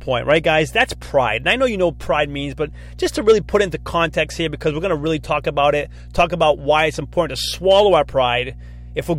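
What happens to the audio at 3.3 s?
At 3.3 s the speech sits on top of mains hum that runs through the whole clip: a steady low tone at 60 Hz, roughly 20 dB below the speech, picked up when the power line couples into the signal through a ground loop or a nearby transformer. On a spectrogram it shows as a thin, unbroken horizontal line at 60 Hz, with some low harmonics above it; in the waveform, the quiet gaps carry a regular low-frequency ripple instead of flat silence.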